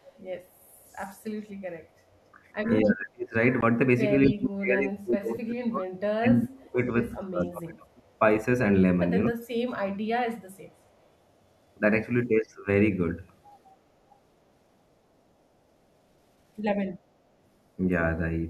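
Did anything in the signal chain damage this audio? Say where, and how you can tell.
Yes. In call processing, the far end's echo canceller likely let some of its loudspeaker pickup through. The result is echo leak: a copy of the speech trailing by 249 ms at 0.05–0.1 s, 0.85–1.16 s and 4.25–4.3 s. It sits roughly 30 to 35 dB down, rising to about 15 dB below at 4.25 s.

Also in call processing, the echo canceller likely mistook simultaneous talking for echo and pulled everything down. This is speech suppressed in double talk: the speech sinks by as much as about 35 dB at 2.82–3.35 s, 4.27–6.8 s, 7.12–8.05 s and 9.28–9.43 s. The longest stretch runs roughly three seconds.

On the wireless playback link, audio likely failed to reach the headphones in time, causing a Bluetooth dropout. At 3.61 s there is a 14.5 ms hole, which fits a single lost packet. The sound then resumes as though it had kept running underneath.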